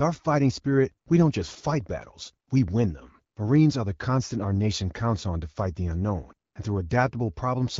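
No technical faults are audible.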